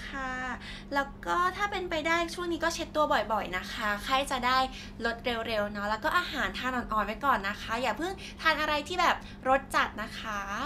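No technical faults can be heard anywhere in the recording of speech; the signal stays continuous and steady throughout.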